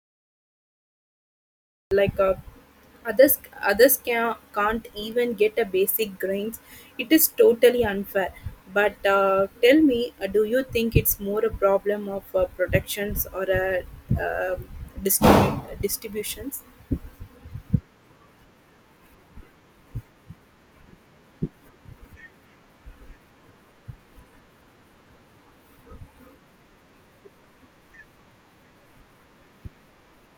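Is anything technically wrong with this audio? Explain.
Yes, there is a cut-off start. The recording or stream only began capturing audio at about 1.91 s, so the first 1.91 s of this speech clip is pure digital silence rather than room sound. The capture didn't open at a pause, so at 1.91 s the speech enters abruptly, already partway through a sound, with no natural attack or fade-in. The opening of that utterance is simply missing.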